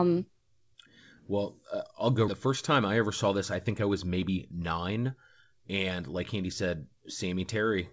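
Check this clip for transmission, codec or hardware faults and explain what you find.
Two transmission faults are audible in this speech clip. The call codec itself carries nothing above 8 kHz, as G.722 at 64 kbps would.

Skip ahead, 2.28 to 2.30 s: right after "well uh I'll go", roughly a second of audio is dropped and playback jumps straight to later queued audio. The two sides join abruptly with no silence or concealment fill, which distinguishes it from a dropout.

Jitter buffer speed-up, 2.46 to 6.68 s: the buffer still held excess delay, so it repeatedly cut out short pitch-period segments, removing about 0.4 s in total. The speech runs about 8% fast and sounds hurried. Its pitch stays unchanged, unlike a resampling error.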